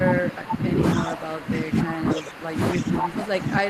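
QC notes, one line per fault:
throughout, speech suppressed in double talk: with both ends talking at once, the echo canceller likely could not tell this talker from the loudspeaker echo and turned everything down, so the speech keeps dipping in level, at its deepest by about 20 dB.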